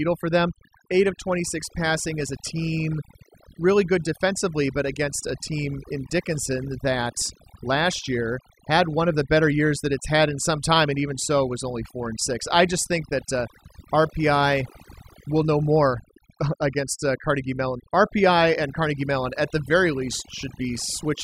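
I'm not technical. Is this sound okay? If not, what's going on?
No. The problem runs through the whole clip. It is overdone noise removal. Someone used a cleanup tool to take out background noise, and set it far too strong. The tool cannot tell noise from the quieter parts of the voice, so it strips both away. That is why the gaps between phrases fall almost silent, with twinkling specks.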